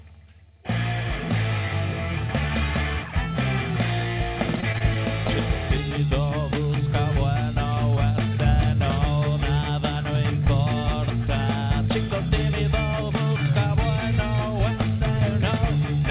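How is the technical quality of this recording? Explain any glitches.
The recording has one glitch: a short stretch of choppy, robotic sound. It is heard through narrowband call audio with nothing above 4 kHz, which points to G.711 mu-law.

From 4.56 to 5.31 s, repeated packet loss leaves six brief holes, each under 20 ms. The last sound is stretched to cover each hole, giving choppy sound. Because the holes come in a cluster, it sounds robotic rather than like a single dropout.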